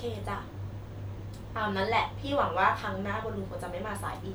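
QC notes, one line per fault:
No fault found.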